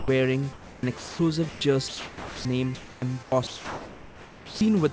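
At 0.00–0.08 s the sound gives way to steady comfort noise, likely sound dropped by the voice detector mistaking it for background. From 0.53 to 1.19 s it turns choppy, likely sound chopped by the voice detector switching repeatedly. Further drops to comfort noise follow at 1.49–1.61 s and 1.88–2.45 s, and choppy switching returns from 2.75 to 4.61 s. Throughout, nothing is heard above 8 kHz, which fits the G.722 call path.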